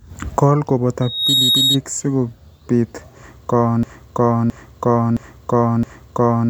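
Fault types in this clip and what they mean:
Loudspeaker feedback squeal: The microphone picks up its own loudspeaker, and the loop runs away at one frequency. In this speech, a tone near 3.8 kHz swells over roughly a third of a second from 1.01 s. It sits about 5 dB above the speech and stops at 1.79 s.
Broken-record loop: From 3.83 s to the end, a 0.67 s fragment repeats exactly, back to back, four times. The speech that belonged there never arrives. The likely cause is a stalled player, encoder or stream that kept resending its last fragment.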